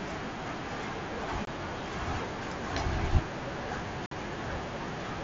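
Unconcealed Bluetooth headset packet loss: headset-to-phone packets vanished unfilled, cutting abrupt silent holes in the speech at 1.45–1.48 s and 4.06–4.12 s.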